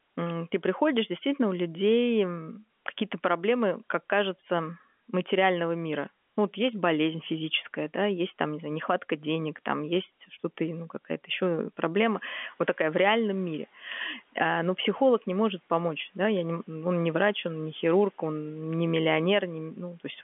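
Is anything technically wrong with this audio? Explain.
Yes. From 11.97 to 13.68 s the noise suppressor is catching up. The room noise jumps by about 12 dB around 12 s. The suppressor's noise estimate lags, so the noise comes through louder, then sinks by about 7 dB over 1.7 s.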